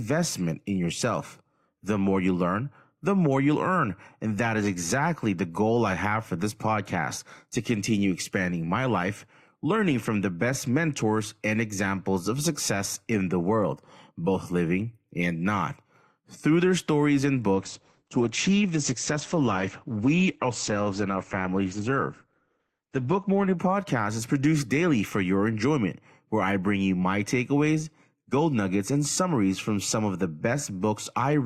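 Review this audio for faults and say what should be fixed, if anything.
Right after "their stories and", at about 17.5 s, the speech suddenly thins out and gets swirly until about 23.5 s, then snaps back. That's the adaptive stream dropping to a lower bitrate for six seconds: nothing survives above 8.8 kHz, and the smeared texture fits Opus falling from around 64 to around 12 kbit/s, with no gap at either switch. To avoid it, capture from a steady connection, or pin the stream to a fixed high-bitrate rendition while recording.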